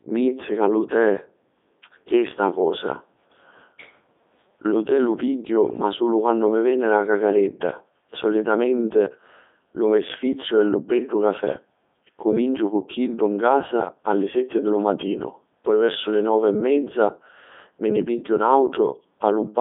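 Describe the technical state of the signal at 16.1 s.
At 16.1 s, as throughout, the speech runs through a Codec 2 vocoder, likely near 3.2 kbit/s, rebuilt from sine waves rather than the waveform: robotic and buzzy, not merely muffled, and nothing above 3.8 kHz.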